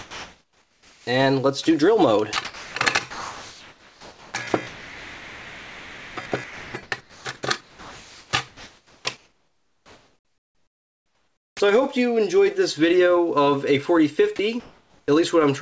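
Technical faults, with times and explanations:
0.00–1.07 s and 14.60–15.08 s, comfort noise in place of the background: the real background gives way to a steady, featureless hiss, about 1 dB quieter in the first stretch and about 2 dB in the second, sitting about 38 dB below the loud parts. The sender likely stopped transmitting during detected silence, leaving the receiver to synthesise a rough noise match.
1.03–1.07 s and 15.04–15.08 s, onset clipped by the voice detector: each time sound returns it starts abruptly, its first 40 ms missing and the soft beginning gone. The sender's voice detector was likely late to register the restart, so comfort noise was played over that opening.
2.33–2.75 s, 3.11–7.25 s and 7.61–11.60 s, sound chopped by the voice detector: the sound turns choppy, with quiet edges dropping out. In all, about 0.33 s, 3.45 s and 3.72 s are replaced, because the voice detector likely kept toggling transmission on and off.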